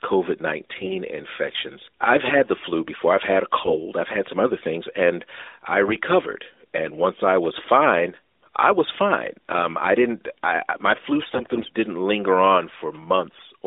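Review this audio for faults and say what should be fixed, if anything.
AMR bit errors occur at 3.64 to 3.79 s (after "before I've had a", before "I've had some other"), 5.86 to 5.96 s (after "other things and I"), and 11.22 to 11.72 s (after "didn't I my flu", before "didn't linger"). In each burst, corrupted lower-priority bits in the AMR frames misplace the excitation pulses and skew the fine pitch, gain and spectral values. Pitch and level roughly hold, but the sound turns hoarse and gargly, worst in the first and last bursts, where around one bit in ten is wrong. The narrowband band limit of about 300 Hz to 3.7 kHz fits the AMR-NB codec, here running at 12.2 kbps. Stronger error protection or better radio conditions on the link would prevent this.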